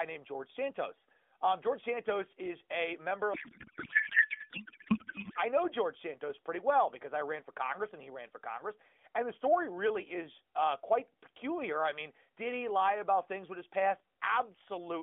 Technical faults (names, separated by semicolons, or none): codec payload misread